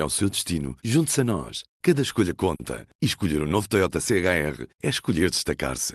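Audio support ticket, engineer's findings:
Jitter buffer underrun at 2.55–2.61 s: short stall from a late packet. The receiver stretched the preceding speech by about 40 ms until the packet arrived, then resumed at the same point. Nothing dropped, but one sound is held too long with a slight buzz or dip. Playout delay is 40 ms higher afterwards.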